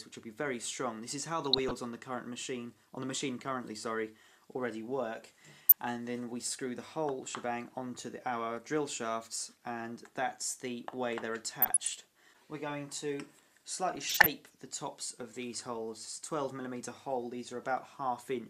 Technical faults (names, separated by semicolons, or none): DAB burbling